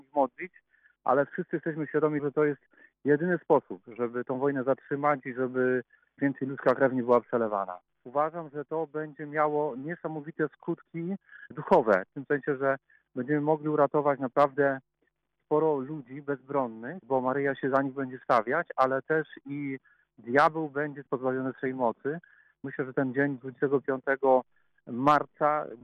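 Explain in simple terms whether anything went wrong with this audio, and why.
Nothing went wrong with this audio; there are no faults to point to.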